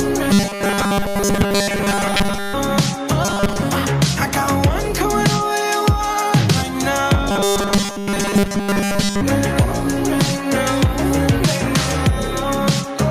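From 0.31 to 2.54 s, 3.25 to 3.63 s and 7.31 to 9.21 s there's robotic sound from repeated short buffers, a rigid metallic buzz at 200 Hz. It's likely from audio arriving too seldom and a 5 ms chunk being looped to cover most of each gap.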